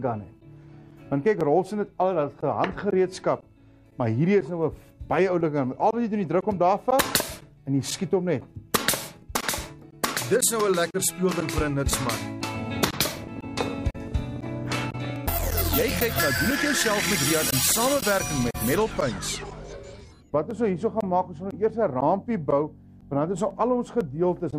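From 12.72 to 18.24 s, a train of clicks ticks irregularly, about 11 per second, roughly seventy in all, peaking near signal level. Likely interference.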